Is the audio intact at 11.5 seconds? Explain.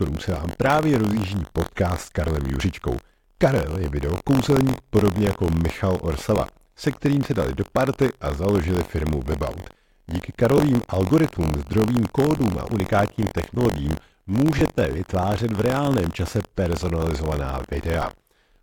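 No. Buffer tearing persists throughout: each period splices in a brief sliver of audio one lap old, producing a robotic 46.9 Hz buzz that fits a 1024-sample buffer.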